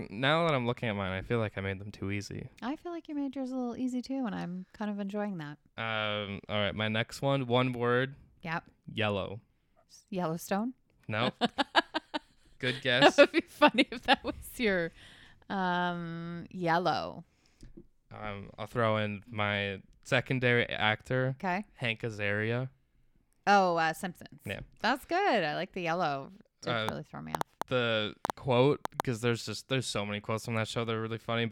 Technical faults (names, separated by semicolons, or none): train of clicks